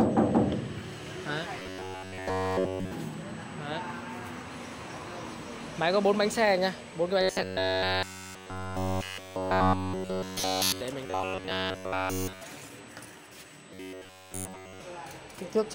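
Right from the start there's a USB whine, a steady, fixed tone at 8 kHz sitting about 30 dB under the audio for the whole clip. That's the bus's 125-microsecond microframe rhythm leaking in through power or ground, heard as a thin, high whistle.

Then, from 1.60 to 2.91 s, 7.22 to 10.81 s, 11.06 to 12.42 s and 13.74 to 14.80 s, the sound turns into a rigid metallic buzz at 93.8 Hz. That's likely robotic sound from repeated short buffers: a chunk of roughly 10.7 ms keeps looping while almost all the real audio in those spans is skipped.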